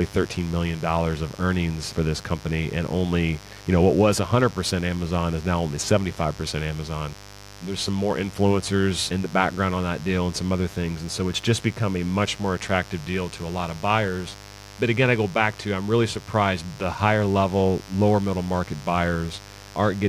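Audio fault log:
Throughout: mains buzz. Switching spikes from a 50 Hz supply have got into the speech path, twice per cycle, so energy sits on 100 Hz and its harmonics and climbs well into the kilohertz range. The result is a steady, raspy buzz under the speech, roughly 20 dB below it. A spectrogram shows evenly spaced horizontal lines at 50 Hz multiples running unbroken across the clip, and the waveform shows a sharp spike every 10 ms even in pauses.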